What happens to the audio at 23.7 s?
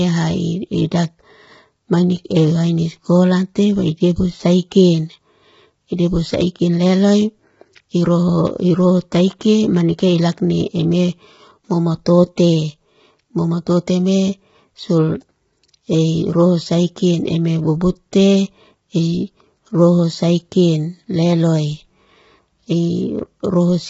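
At 23.7 s the speech is rough and grainy, with noise filling the gaps between the harmonics and nothing above about 7.7 kHz. That is not a local event: the same damage runs through the whole clip. The likely cause is heavy low-delay AAC compression of the AAC-ELD kind used in video calls, at a rate that sounds close to 16 kbps. At so low a rate the encoder quantizes coarsely, so noise fills in between the harmonics. A plain low-pass filter would only dull the sound, with no grain.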